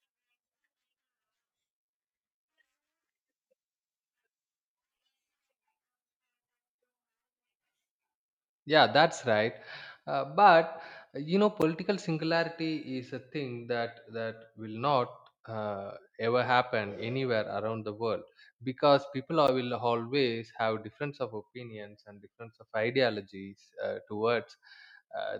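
At 11.62 s, after "but you know", and 19.47 s, after "the world because people", a block of digital silence about 11 ms cuts in, fitting a 512-sample buffer not filled in time. Unlike a faded dropout, its edges jump straight to silence, giving a sharp tick.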